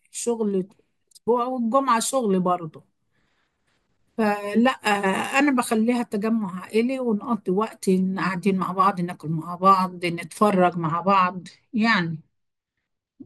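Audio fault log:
10.51–13.25 s, channel delay (comb filtering): one channel of the speech arrives a couple of samples late, around 0.04 ms, so summing to mono cancels content near 10 kHz. The top end thins, leaving these final seconds dull.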